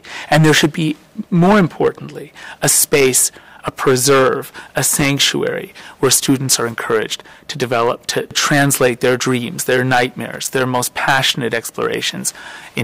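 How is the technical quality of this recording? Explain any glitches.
Technical quality is poor. Two faults are audible.

Hard clipping runs through the whole recording. The signal is driven about 17 dB past what the chain can pass. Peaks are sliced flat, roughly one sample in twenty-five. The flattened tops add high harmonics, so every loud moment carries a harsh fuzz.

Loose connector crackle appears twice, from 4.93 to 5.06 s and from 10.34 to 10.48 s. A worn or dirty contact is making and breaking rapidly. Each burst chops the signal for about an eighth to a seventh of a second. The result is irregular scratchy crackle.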